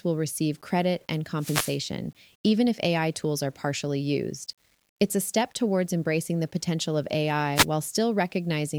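Speech clip with grainy, signal-following distortion throughout, about 40 dB below the level, gritty on quiet passages: likely low bit depth without dither, consistent with 9-bit rounding.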